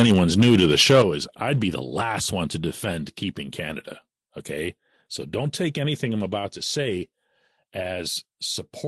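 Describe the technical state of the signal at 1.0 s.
Microphone overload runs from 0.00 to 1.02 s, so at 1.0 s the signal is still flat-topped. The input level was likely set too high, driving peaks about 6 dB past the converter's ceiling so that around 7 percent of samples are clipped. With the waveform crests cut off, the loudest syllables take on a harsh, crackly edge.

A microphone volume step-down follows at 1.02 s, just after the moment asked about. The call software likely reacted to the clipped peaks by lowering the device's input volume in a single jump of about 8 dB. Speech and background both fall in level abruptly at that instant, and the crackling edge disappears with the drop. The band-limited, coded character heard throughout fits an Opus call path carrying the sound.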